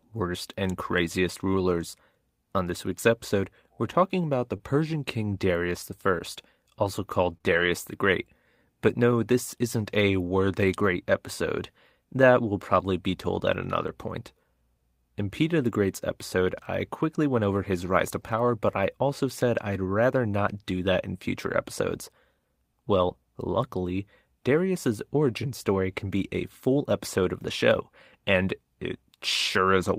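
Between 4.57 and 7.71 s the speech shows scattered short gaps: a few packets arrived late or not at all, and the receiver bridged each hole, the longest around 30 ms, by extending the preceding sound. These patches come through as brief ticks, slight smears or small hiccups.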